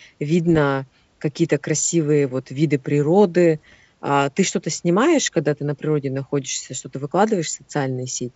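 Bits flipped on the ADPCM link corrupt the decoder's step size and predictor, so each error keeps misbehaving for some milliseconds after it lands. These are bit errors on an ADPCM link, heard from 0.50 to 0.60 s as pops with a rough burst and brief level changes. They return from 3.58 to 3.76 s, longer and denser at what sounds like roughly twice the error rate, under otherwise clear wideband G.722 coding.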